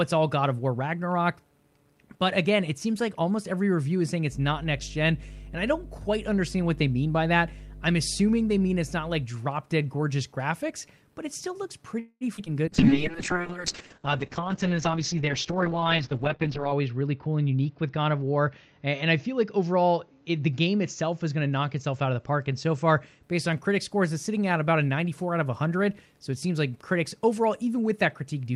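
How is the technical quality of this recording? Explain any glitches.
The speech has a cluster of network glitches starting near 12 s.

From 11.99 to 12.24 s there is a call audio freeze. The last sound is stretched into a fading buzz, with about 30 ms of near silence. Packets were likely held up in transit, so 214 ms of delay is added and nothing is lost.

At 12.37 to 12.41 s playback skips ahead. Roughly a tenth of a second is dropped, and both sides are joined almost directly.

At 12.46 to 12.49 s comes a short concealed packet loss. About 40 ms never arrived and was patched by extending the previous sound, leaving a brief smear.

From 12.67 to 23.29 s there is a call bitrate drop from 48 to 7 kbps. Bandwidth narrows from 20 kHz to 8 kHz, with the lowest rate held for about 4.1 s. The voice turns rough and muffled.

Two jitter buffer slow-downs follow, at 12.81 to 13.51 s (92% speed, 63 ms added) and 14.40 to 14.76 s (91%, 40 ms added). 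Repeated pitch periods stretch the speech at the same pitch.

A jitter buffer speed-up runs from 14.87 to 17.01 s at 108% speed. Short pitch periods are trimmed to cut about a fifth of a second of backlog, so the speech sounds hurried.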